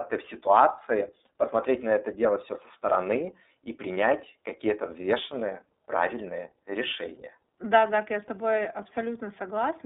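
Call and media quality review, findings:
iLBC codec throughout: band-limited speech, roughly 250 Hz to 3.7 kHz, rough synthetic texture; spectrogram empty above 3.7 kHz. Fits 30 ms frame, 13.33 kbps mode.

Lost iLBC frames at 1.26 s: brief buzzy held-vowel smear, about 30 ms, consistent with one dropped frame concealed by repeated pitch cycle; waveform shows periodic filler, no gap.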